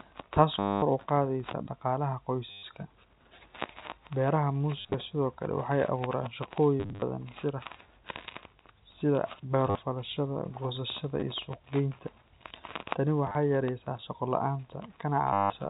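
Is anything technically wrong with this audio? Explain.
Yes. Packet loss with last packet repeated occurs at 0.59–0.82, 2.51–2.63, 4.78–4.94, 6.80–7.02, 9.67–9.79, 11.20–11.22, 13.27–13.35 and 15.33–15.50 s. Missing packets are filled by replaying the previous one. Longer gaps buzz robotically near 100 Hz, which points to 10 ms packets.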